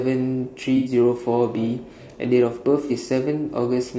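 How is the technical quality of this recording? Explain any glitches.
The technical quality is poor, with audible coding damage throughout and two short dropouts.

Throughout, the speech sounds rough and grainy, likely from low-delay AAC compression at a low bitrate. A spectrogram would show noise filling between harmonics and a thin, synthetic top band.

At 0.77 to 0.91 s and at 2.87 to 2.92 s, AAC frame loss with concealment produces smeared, noisy patches lasting about 90 ms and 30 ms. The decoder rebuilt the missing audio from the previous spectrum. These patches appear as blurred smudges in the spectrogram.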